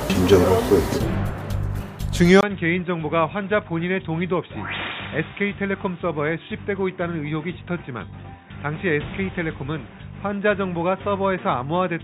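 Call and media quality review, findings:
Input switched to a poorer device at 2.41 s, to end. 20 ms silence, then level drops about 10 dB, nothing above 3.8 kHz, new noise floor. Likely a fallback to a headset call profile.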